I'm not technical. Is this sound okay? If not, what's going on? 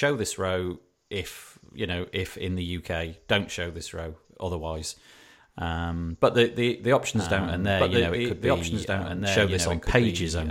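No. From 7.15 s to the end, the speech is heard twice. A second copy, a bit quieter than the first, trails it by about a second and a half, so each part overlaps what comes after. This is a doubled audio track. The copy appears suddenly at 7.15 s and is clean, with no fade or room echo. That is likely because the same recording got mixed in a second time through a slower route.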